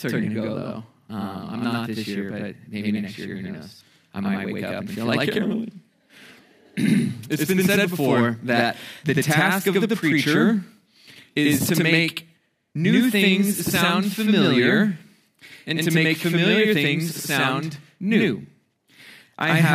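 Throughout, everything is doubled: a second copy arrives about 85 ms behind at the same level, heard as a flat slap echo. That's channel delay (doubling), one channel running late, which fits a 4096-sample buffer, then both summed to mono.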